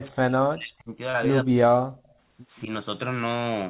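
From 0.11 to 0.95 s, an echo canceller likely mistook simultaneous talk from both ends for its own loudspeaker echo and clamped the whole signal, so this speech in double talk was suppressed, sinking by as much as about 40 dB. The same thing recurs, more briefly, from 1.44 to 1.81 s.

Between 1.10 and 1.15 s, 40 ms of audio arrived too late for the decoder. The receiver covered about 32 ms of the gap by extending the preceding sound before rejoining the real signal. This short concealed packet loss is heard as a quick smear or wobble.

From 2.05 to 2.14 s, a far-end echo canceller likely failed to remove all of what its microphone picked up from the loudspeaker. This echo leak comes back as a very faint copy, roughly 40 dB down, trailing the speech by 180 ms, within the 4 kHz band of the G.711 call path.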